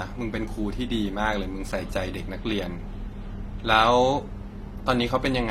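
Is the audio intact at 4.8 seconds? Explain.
No, at 4.8 seconds the speech carries transcoding between lossy codecs, present across the whole clip rather than at that moment alone. Nothing is heard above about 16.2 kHz, and the sound points to an AAC-style encode likely re-encoded at a lower rate into HE-AAC. The second codec wastes bits reproducing the first one's artefacts and adds its own, so two distinct sets of artefacts are heard together, unlike the single consistent signature of one codec.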